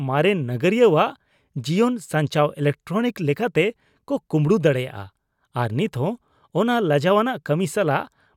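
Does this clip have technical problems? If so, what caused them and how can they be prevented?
No, this clip has no technical problems, so there is nothing to trace to a cause or to prevent.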